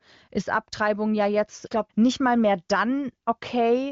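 Nothing goes wrong anywhere in the speech here; it simply comes through the AMR wideband (HD Voice) codec, with nothing above about 7.4 kHz and a fullness that fits its high rate of around 23 kbit/s.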